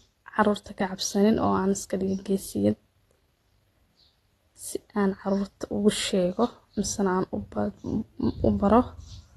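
From start to finish, the speech sounds dull and smeared. Nothing is heard above about 12.4 kHz, so the top of the sibilants is missing. Those sibilants carry a fizzy, warbling texture, and sustained sounds shimmer unsteadily. The likely cause is AAC compression, with an AAC-LC encoder starved of bits. That fits a low bitrate near 32 kbps. The encoder lowers its cut-off and drops or roughly fills weak high bands, which leaves this damage plainly audible.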